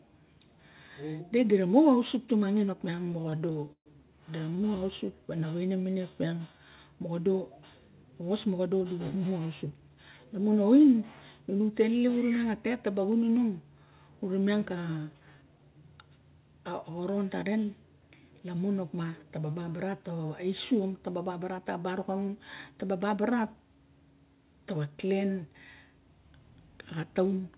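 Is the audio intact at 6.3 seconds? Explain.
No, 6.3 s falls inside a jitter buffer slow-down that runs from about 4.79 to 6.77 s. The receiver's buffer was running short or had just raised its target delay, so it padded playback by repeating single pitch periods and slivers of pauses back to back, adding roughly 267 ms. The speech plays at about 87% speed with the pitch unchanged, so sounds stretch out and drag, sometimes with a faint warble, all within the G.711 call path's 4 kHz band limit.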